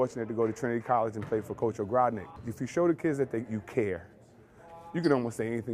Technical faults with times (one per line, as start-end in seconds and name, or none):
0.97-5.74 computer activity noise